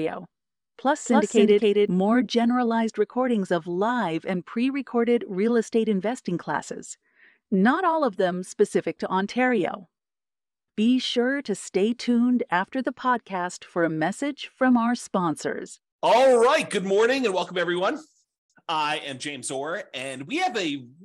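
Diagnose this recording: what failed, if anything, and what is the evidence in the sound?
A doubled audio track runs from the start and stops abruptly at 1.88 s. A full-band copy trails about a third of a second behind, at roughly equal level. It has no decay or room colour. The likely cause is a second, slower capture path mixed in at the driver stage.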